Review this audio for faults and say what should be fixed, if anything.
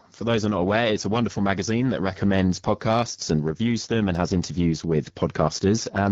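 The speech passed through an AMR wideband (HD Voice) codec at one of its lowest modes, and the roughness fits about 8.85 kbit/s. With so few bits for the pulse-driven vocal tract model, the voice turns raspy and gritty throughout the clip. Run the call at 12.65 kbit/s or higher so the codec keeps speech clear.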